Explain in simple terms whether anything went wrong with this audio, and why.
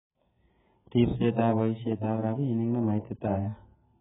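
The speech sounds dull and muffled throughout, with nothing above 3.7 kHz and a smeared texture, most likely from heavy AAC compression stripping away fine detail.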